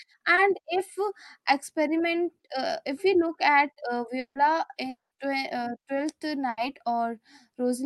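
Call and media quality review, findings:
Short concealed packet loss, 0.35–0.39 s: quick smear around 20 ms. Jitter buffer missed a packet, and the decoder patched it by extending the previous sound before blending back.

Two gaps at 4.19–4.37 s and 4.89–5.13 s: a fading buzz or hiss, then dead air of roughly 0.09 s and 0.16 s. Likely a long network dropout; concealment ran out and audio resumed later, with the middle lost.

Burst of packet loss, 6.49–6.59 s: about 80 ms held buzz or hiss decaying away. Consecutive packets lost, the concealment faded, and playback jumped ahead past the missing chunk.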